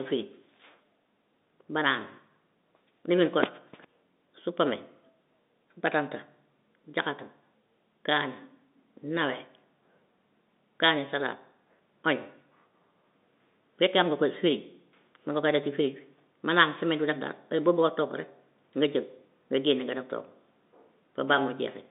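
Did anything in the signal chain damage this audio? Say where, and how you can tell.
No, nothing in the signal chain damaged this audio; it simply carries the narrow band of an ordinary telephone line.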